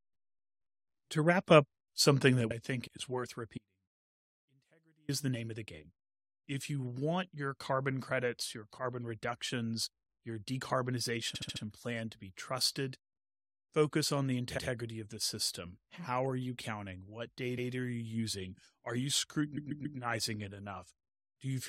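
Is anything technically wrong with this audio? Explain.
Yes, this speech clip has three kinds of fault.

One channel drops out from 2.52 s to the end. The level of everything common to both sides falls abruptly by about 6 dB and stays there, which points to one stereo channel being lost and the mono sum likely carrying only the surviving side. On a waveform the envelope visibly shrinks at 2.52 s; a spectrogram shows the whole band dimming at once, with no taper.

An audio dropout to a faint residue runs from 3.58 s to 5.09 s, about 1.5 s in all. The sound cuts out mid-flow and returns just as suddenly. In between, only a faint trace remains, roughly 35 dB below normal. The wanted signal was likely lost while the path after the break stayed live. The waveform shows a near-flat band with hard edges, and the spectrogram a dark gap with faint low-level energy.

Repeated frames cause stutters at four points. 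At 11.34 to 11.62 s a 70 ms block plays four extra times, adding 0.28 s. At 14.57 s a 116 ms block repeats once. At 17.57 s a 139 ms block repeats once. At 19.56 to 19.98 s a 139 ms block plays three extra times, adding 0.42 s. Compressed frames were sent or written more than once, so the decoder replays them. Spectrograms show identical patterns tiling side by side.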